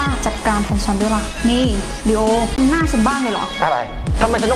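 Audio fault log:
2.56 s, CD skip: playback drops out for a very brief mute, heard as a tick, then resumes from a different point in the programme. The laser has jumped to another turn of the disc spiral, so continuity breaks abruptly rather than fading.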